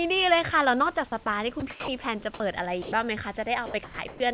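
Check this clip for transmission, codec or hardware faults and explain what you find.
The speech passes through a call path whose band stops at 4 kHz, and a voice detector at the sending end repeatedly interrupts it. There are three kinds of fault.

Sound dropped by the voice detector occurs at 1.6 s, from 1.70 to 1.88 s, from 2.82 to 2.92 s and from 3.84 to 3.98 s. The likely cause is a detector that mistook trailing or quiet speech for background and stopped sending, so the receiver substituted comfort noise. The speech briefly turns into flat hiss. On a spectrogram, the harmonic striations give way to a uniform grey band. On the waveform, the speech envelope flattens into an even noise floor.

An onset clipped by the voice detector occurs at 2.38 s. The detector was likely slow to register that speech had resumed, so about 20 ms of the beginning was never sent and comfort noise stood in for it. 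The sound starts abruptly, without its soft lead-in. The waveform jumps from flat noise straight into the speech, and the spectrogram shows a hard vertical edge where a gradual rise belongs.

Comfort noise in place of the background appears from 3.66 to 3.74 s and from 4.08 to 4.20 s. During these pauses, the transmission likely went discontinuous, and synthetic noise replaced the real room noise, which sits about 32 dB below the speech. The ambience turns smooth and featureless. The first patch changes by about 6 dB in level, while the second changes by only about 1 dB. On a spectrogram, the textured background becomes an even wash.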